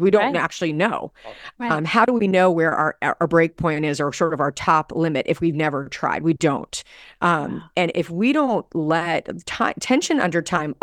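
A speech recording with no audible technical faults anywhere in the signal.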